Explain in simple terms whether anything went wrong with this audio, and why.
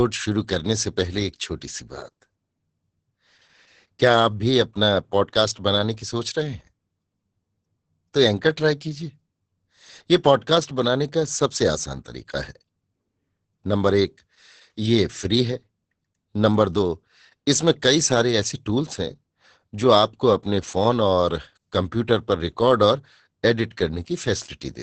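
Heavy Opus voice compression runs through the whole clip. Everything above 8.8 kHz is cut off, so the speech sounds muffled, hoarse and slightly robotic.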